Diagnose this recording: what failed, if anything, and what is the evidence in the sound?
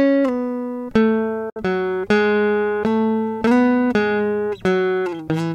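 Silence from 1.50 to 1.56 s, then the music resumes as if it had played on: likely a Bluetooth dropout, with packets lost at playback.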